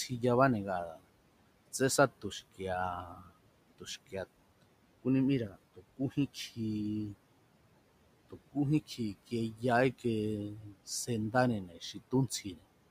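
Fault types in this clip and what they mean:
noise suppressor artifacts: Throughout the clip a suppressor pulls down whatever it judges to be steady noise, by about 18 dB. The room noise, which sits about 19 dB under the speech, sinks in the gaps and swells back under each phrase. Unlike a simple gate, the change happens band by band, so the background does not switch cleanly on and off.
speech cut by the noise suppressor: At 0.91, 3.06, 3.79, 5.49, 8.98, 10.57 and 11.67 s the suppressor mistakes quiet parts of the speech for noise and turns them down along with the background, by about 10 to 18 dB and deepest at 0.91 s. Each affected stretch lasts only a fraction of a second. Soft consonants and endings sound swallowed or faint. Unlike a network dropout, the sound fades rather than vanishing, with no click or gap of silence.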